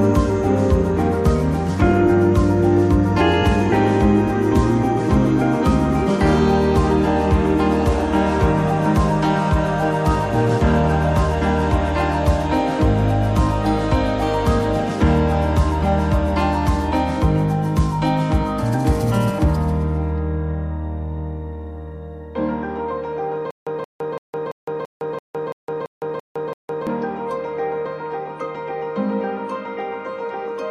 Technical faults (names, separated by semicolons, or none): stutter with silent gaps